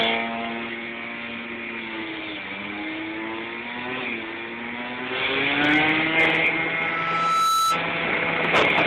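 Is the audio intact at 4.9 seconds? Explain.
Yes, at 4.9 seconds the audio is intact, with no dropout, click, distortion or other fault.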